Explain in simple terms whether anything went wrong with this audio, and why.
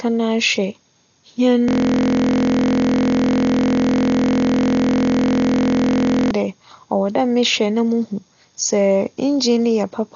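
A system hang loop runs from 1.68 to 6.31 s. The computer froze and replayed one 23.2 ms slice over and over, making a steady 43 Hz buzz, which fits a 1024-sample buffer.

Dolby Digital compression throughout likely explains the dull, muffled sound. Nothing reaches above 7 kHz, and heavy data-saving adds a rough, fluttering grit.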